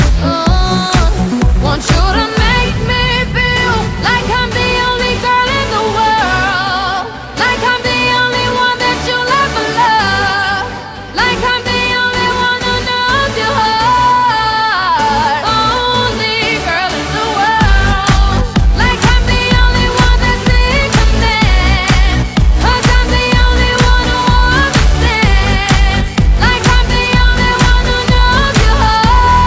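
Nothing in the audio stood out as a technical problem on listening.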